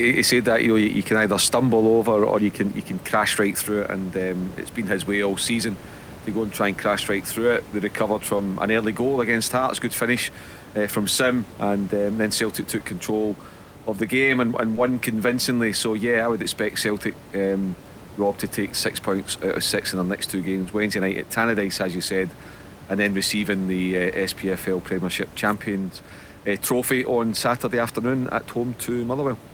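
Short concealed packet loss shows up at 8.37–8.41 s before "an early goal against", 14.75–14.79 s after "the game and and", and 20.63–20.67 s after "in their next two". Each time about 20 ms of audio never arrived, so the decoder stretched the preceding sound across the hole, leaving a quick smear or wobble.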